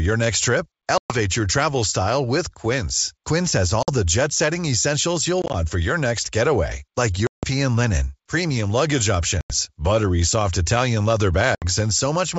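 Packet loss on an ADPCM call cuts hard-edged silent gaps into the speech at 0.98, 3.83, 5.42 (scattered short dropouts over 0.12 s), 7.27, 9.41 and 11.55 s. The longest, 160 ms, falls between "your next getaway like" and "linen premium luggage". On a waveform these are flat silent stretches. On a spectrogram they are blank vertical bands with sharp edges. Because the missing data also throws the decoder's predictor and step size out of step with the sender's, each return starts slightly distorted before settling.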